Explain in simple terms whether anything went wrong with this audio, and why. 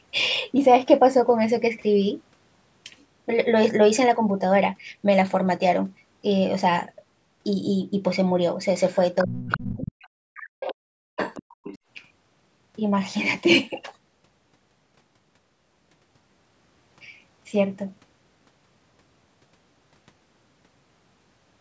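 Several things go wrong in the middle of this speech clip, all between about 9.2 and 11.8 seconds, and all point to a phone call's echo canceller struggling.

The first is the other side's voice leaking through. A second, fainter voice slips in as short scraps at about 9.19, 9.50, 10.03 and 10.62 seconds, then for a longer stretch from 11.18 to 11.78 seconds. The likely cause is that the talker's device played the far end on a loudspeaker and the echo canceller left part of it in the microphone signal. The scrap at 9.50 is nearly as loud as the talker, while the one at 10.03 is barely there.

The second is speech suppressed in double talk. From 9.24 to 11.19 seconds, about two seconds, the talker's voice sinks sharply and at its worst almost disappears. Both sides were likely talking at once, and the canceller, unable to tell its own talker from the loudspeaker echo, turned everything down together.

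The third is background gated by the echo canceller. Between 11.48 and 11.58 seconds the room sound briefly drops out, for about a twentieth of a second in total, then returns. While the loudspeaker was sounding, the canceller clamped the microphone hard for that moment. The missing deep bass comes from the call's normal microphone filtering and is not a fault.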